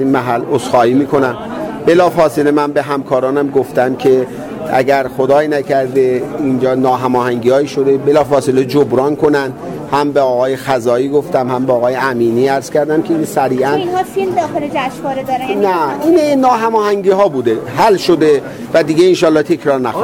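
Hard clipping runs throughout: peaks overdriven by about 3 dB, under one percent of samples, are sliced flat, giving brief crackle on loud moments rather than saturation's smoother, continuous warmth.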